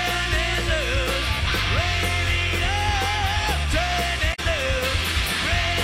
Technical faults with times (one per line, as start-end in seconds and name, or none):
4.30-4.39 damaged data in a compressed stream